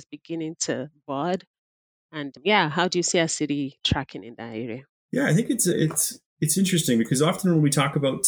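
At 4.10 s, right after "you see our city" and before "in that", there's an underrun with held sample: the output buffer ran dry for about half a millisecond, and the converter just held its last value, so the waveform flattens out briefly and a sliver of audio goes missing.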